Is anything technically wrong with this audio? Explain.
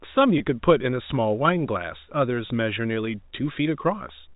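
Yes. There is packet loss with pitch repetition at two points in this speech: 0.38 to 0.40 s and 2.48 to 2.50 s. Each gap lasts about 20 ms, which fits one lost packet. The receiver filled each hole by repeating the last pitch period and fading it out. Because the gaps are so short, each one sounds like a brief held, slightly buzzy note. The band limit of the G.711 telephone coding can be heard throughout.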